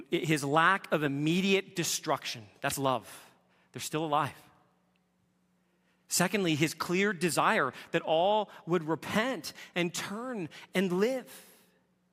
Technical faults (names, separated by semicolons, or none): none